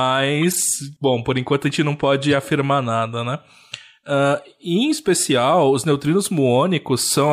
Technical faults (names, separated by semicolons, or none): corrupt frame decoded